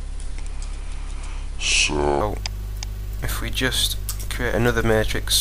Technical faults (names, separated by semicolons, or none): section at the wrong speed